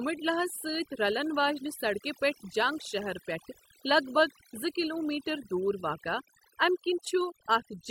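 A speech recording suffers from overdone noise removal from start to finish. The denoiser was pushed too hard. Any frequency band that sits close to its noise estimate gets cut deep or muted. The background drops away, broken by twinkling, chirpy specks. Quieter parts of the voice fall below the threshold and vanish too.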